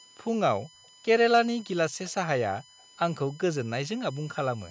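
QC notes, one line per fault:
Throughout: USB whine. A steady tone at 1 kHz sits under the speech for the whole clip, with its strongest component high up at 16 kHz, about 25 dB below the speech. Current drawn in 1 ms bus frames leaks into the power or ground, so the pitch locks to 1 kHz and its multiples. Mains hum would sit down at 50 or 60 Hz and its low harmonics, and a fan or room tone would not hold a single fixed pitch.
0.70–0.81 s and 2.64–2.80 s: background gated by the echo canceller. The room sound collapses by about 38 dB in the first dip and about 40 dB in the second. The dips last about a tenth of a second and a little longer. The canceller clamped the microphone while the loudspeaker was playing, then released it. A network dropout would cut the speech along with the room sound, but here only the background vanishes and then returns.
0.84–0.88 s: echo leak. Just after the first gated dip there is a brief, very faint repeat of the speech, around 40 dB down and trailing the original by 184 ms. 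It is likely residue that the far end's echo canceller failed to remove from its loudspeaker pickup and sent back. At 184 ms the copy is a distinct delayed repeat. Room reverberation would instead smear continuously from the original with no gap.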